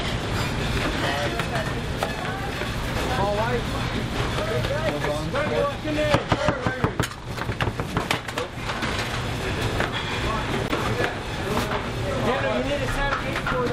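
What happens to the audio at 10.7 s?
Damaged data in a compressed stream hits from 10.67 to 10.71 s: corrupted bytes leave the decoder misreading those frames and losing sync until it finds the next valid frame header. The result is a brief 40 ms chirp or blip cutting across the sound.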